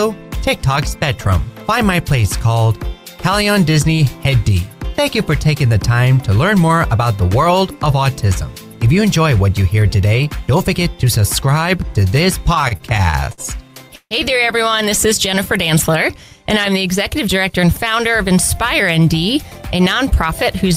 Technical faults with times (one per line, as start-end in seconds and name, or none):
12.54-14.14 repeated stalls (stutter)
17.27-17.90 jitter buffer speed-up